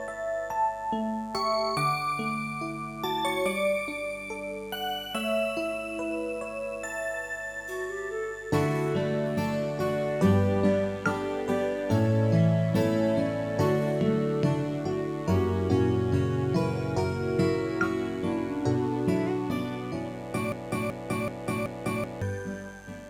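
A mains buzz runs through the whole recording. It is a steady, raspy tone built on 50 Hz, with harmonics climbing into the kilohertz range, sitting roughly 25 dB below the sound. Sharp switching spikes from a dimmer, rectifier or poor shielding cause it. From 20.52 to 22.22 s there is a broken-record loop. A 0.38 s fragment repeats four times, back to back. The audio that belonged there is gone. The likely cause is a player, encoder or stream stalling and resending its last fragment.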